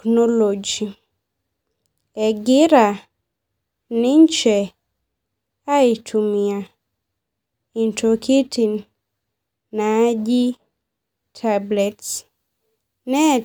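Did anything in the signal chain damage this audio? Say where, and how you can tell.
Yes. From 11.79 s to the end at 13.45 s, the speech suddenly turns thin, bright and hissy on sibilants. This is pre-emphasis left on, introduced at the storage or playback stage. The treble was boosted before storage, and the matching de-emphasis cut was never applied on replay. The top end sits about 8 dB hotter at 10 kHz than at 1 kHz. That tilt fits the CD 50/15 µs emphasis curve.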